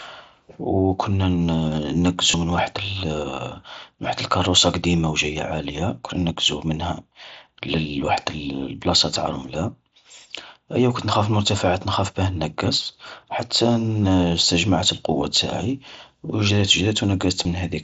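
Speech over an mSBC headset link with concealed Bluetooth headset packet loss. Brief buzzy patches sit at 2.31 to 2.34 s, just before "من وحد", and at 9.14 and 17.43 s. Each patch repeats the preceding waveform to hide a gap of about 15 to 23 ms.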